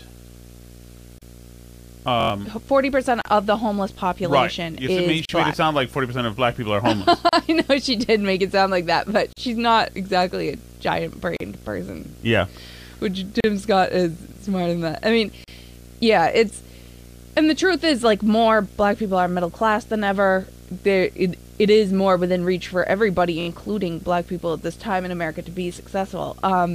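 Underneath the whole speech clip runs a steady buzz at 60 Hz, topped with a layer of fizzy hash, sitting about 25 dB below the speech. This is video or display buzz: a screen or a video cable is leaking its field-rate energy into the audio path. The 60 Hz fundamental is tied to the picture's refresh rate rather than to the mains, and its harmonics build the rough edge above it.

At 1.18 s the speech drops out abruptly for 31.8 ms, then resumes exactly where it stopped. The same hole comes back every 2.0 s, lasting 37.6 ms each time after the first: at 3.22, 5.25, 7.29, 9.33, 11.37 (right after "not exactly a giant"), 13.40 and 15.44 s (between "than that I mean" and "yeah it's"). This is a gap at a join of encoded pieces. The audio was encoded in 2-second sections and joined without trimming, so each join keeps the encoder's start-up delay and the padding of the final frame as silence. 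Both edges of each gap are smeared.

At 2.21 s, just before "forty percent of the", a 23.2 ms slice of sound repeats several times in a row with a hard seam at each pass. The result is a quick mechanical stutter that runs to 2.30 s. This is a repeated buffer: the playback device ran out of fresh audio and looped the last block it held. The slice length fits a 1024-sample buffer, and roughly a tenth of a second of real speech is lost. The same stutter returns at 23.41 s, shorter this time, ending at 23.48 s and swallowing roughly 70 ms.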